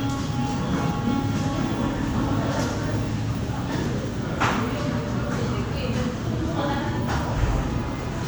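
Damaged data in the compressed stream shows up at 3.86 s in this recording of sounds, as a very short blip lasting only a few milliseconds. At that point part of the compressed data is wrong, so the decoder misreads or rejects the affected frame, loses its place in the stream and has to hunt for the next valid frame header before playback continues.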